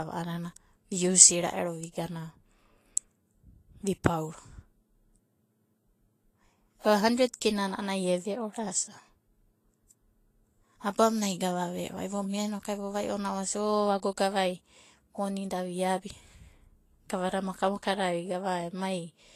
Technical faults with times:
0.00-19.36 Vorbis compression

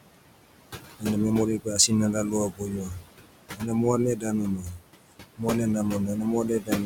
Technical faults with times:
0.00-6.85 noise suppressor artifacts
2.50-3.07 speech cut by the noise suppressor
3.57-3.70 speech cut by the noise suppressor
4.16-4.27 speech cut by the noise suppressor
4.57-4.84 speech cut by the noise suppressor
6.60-6.71 speech cut by the noise suppressor

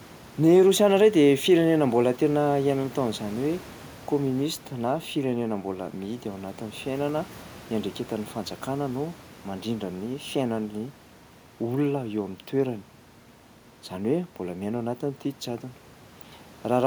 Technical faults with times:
none

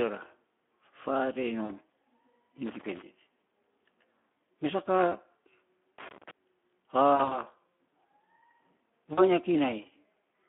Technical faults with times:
0.00-10.49 Speex codec
1.65-1.72 VoIP packet loss concealed by the speech codec
2.66-3.02 loose connector crackle
5.98-6.31 loose connector crackle
7.15-7.39 VoIP packet loss concealed by the speech codec
9.13-9.22 VoIP packet loss concealed by the speech codec

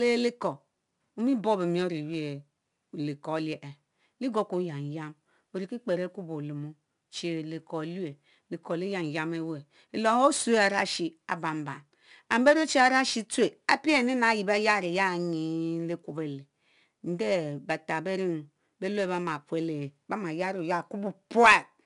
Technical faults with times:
0.00-21.86 4-bit ADPCM compression

